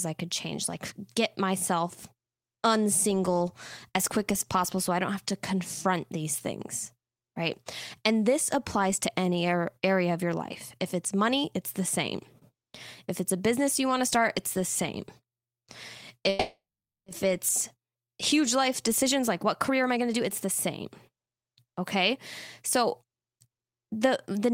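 At 16.29 s the speech stops and a call audio freeze fills the gap until 17.08 s. The receiver extends the last sound into a fading buzz or hiss, and about 470 ms of that stretch is silence. This is likely caused by packets stalling in transit so that the jitter buffer ran dry. When they arrive, playback resumes where it left off with nothing lost, but the insertion adds 770 ms of delay.

To recover that delay, a jitter buffer speed-up follows from 18.33 s to 22.13 s. The receiver repeatedly cuts out pitch-period-sized pieces of the speech, so it plays at 117% of normal rate with unchanged pitch and roughly 0.7 s removed. The speech sounds noticeably rushed. A milder second speed-up runs from 22.76 s to 23.82 s at 108%, trimming about a tenth of a second, with a slight but audible hurry.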